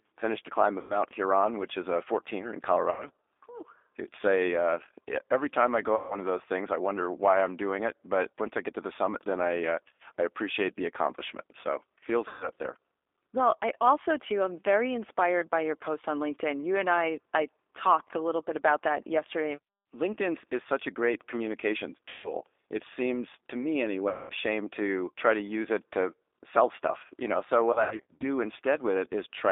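The speech has that rough, slightly synthetic G.729 sound at 8 kbit/s all the way through, squeezed into a phone band of about 300 Hz to 3.6 kHz. VoIP packet loss concealed by the speech codec hits at 0.81, 2.91, 5.96, 12.28, 22.09, 24.09 and 27.73 s. Each time the decoder stretches the missing audio, a 90 to 210 ms gap or, in the last one, 270 ms lost in short runs over 480 ms, into a buzzy tone or coloured noise that fades out.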